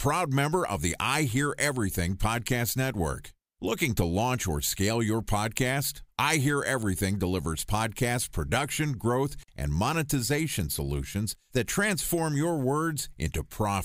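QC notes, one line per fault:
9.42–9.49 s, intermittent contact: the speech drops out abruptly for about 48 ms, bracketed by short bursts of crackle as the connection breaks and remakes, with only faint hiss left in the gap. The pattern points to a loose plug or cable briefly losing contact: the signal path opens mechanically rather than being muted, so the edges are ragged and noisy instead of clean. Check and reseat connectors on the speech chain.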